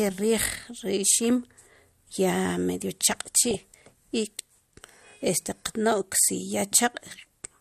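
A short speech clip with a dull, band-limited sound throughout. The top end is missing, and there's a granular, gurgly texture around the voice, with upper detail flickering in and out. That's plainly audible codec damage and most likely MP2 compression at a low rate, something in the region of 80 kbps, where Layer II runs out of bits, switches off its upper sub-bands and quantises the rest coarsely. On top of that there's DAB burbling from 3.11 to 3.87 s and again briefly from 7.19 to 7.25 s. You hear bubbling, squelchy chirps, short blips of noise in single sub-bands. That's the sound of bit errors getting past the error correction into the MP2 data and corrupting samples and scale factors. The first stretch is the heavier one, with an error rate of around one percent. The second is lighter and much shorter.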